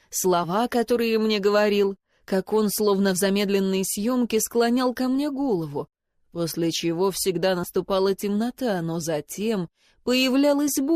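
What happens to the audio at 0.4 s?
At 0.43 s, compressed frames are skipped: about one 20 ms frame is never played, so the audio jumps ahead.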